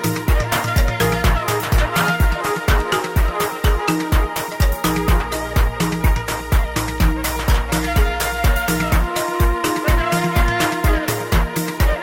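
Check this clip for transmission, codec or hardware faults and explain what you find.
Two brief glitches are present, both from a corrupt frame decoded. From 1.96 to 2.04 s comes a loud glitch, peaking around -5 dBFS, and from 5.33 to 5.40 s a quieter one. Corrupted bits in a few compressed frames made the decoder place energy at the wrong frequencies.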